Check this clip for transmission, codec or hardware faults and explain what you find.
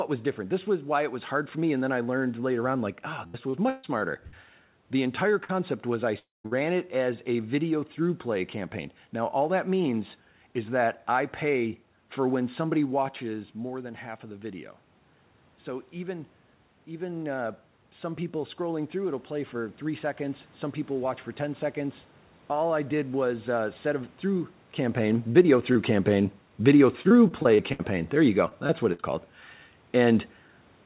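Several transmission faults are present: repeated, short, burst and long packet losses, plus a slow automatic gain rise, all heard through a narrowband call path that cuts off at 4 kHz.

Repeated packet loss (robotic sound) occurs at 2.92–4.34 s after "I learned later on" (five gaps, longest 137 ms), at 25.33–25.77 s (three gaps), and at 27.03–29.04 s (ten gaps, longest 65 ms). Each hole is patched by extending the previous sound, so the audio turns choppy. On a spectrogram this shows as repeated smeared, stretched harmonic blocks.

Short concealed packet loss occurs at 5.44–5.51 s, just before "was I". About 40 ms was synthesized from the preceding sound, giving a brief smear.

The long network dropout runs from 6.19 to 6.46 s, between "was I" and "it as a video". A fading buzz gives way to about 170 ms of silence, likely from a network dropout. It appears as a flat gap in the waveform.

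A burst of packet loss at 6.46–6.63 s loses about 60 ms. The last sound is held and faded, then the audio resumes with material skipped, leaving a short decaying smear.

Automatic gain rising runs from 13.24 to 22.10 s. The input drops about 10 dB, and the gain control lifts the level by about 8 dB over several seconds, so the voice and the room noise swell together. The waveform envelope grows gradually across this stretch.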